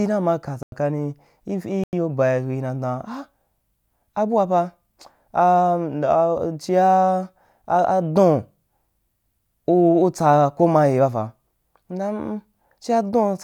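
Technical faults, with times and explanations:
0.63 to 0.72 s and 1.84 to 1.93 s, corrupt frame muted: the speech cuts to silence twice, each gap about 94 ms long, which points to a single compressed frame of roughly that length being damaged, rejected by the decoder and replaced with silence. The sound stops and resumes abruptly, with no fade, and everything after each gap stays in time. On a waveform each gap is a flat line with sharp edges; a spectrogram shows an empty vertical band across all frequencies.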